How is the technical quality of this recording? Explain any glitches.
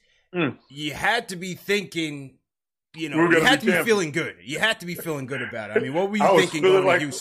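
No technical faults are audible.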